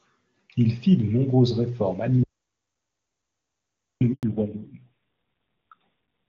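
At 2.23 s the speech cuts off mid-flow into an audio dropout to silence. It lasts until 4.01 s, about 1.77 s. The gap is silent, with no room tone. The input was likely lost and the recorder kept writing silence. Whatever was said is gone.

At 4.13 s, just after the speech returns, comes a handover gap. The voice fades within milliseconds and stays silent for 100 ms, until 4.23 s. The call was switching networks, and no speech frames arrived during the move.

From 4.23 s to the end there is a fallback to narrowband. Before it, the wideband HD Voice sound is clear, consistent with AMR-WB at 23.85 kbit/s. After it, nothing remains above 4 kHz. The voice turns dull and rough, which fits a low-rate narrowband AMR mode around 5.9 kbit/s.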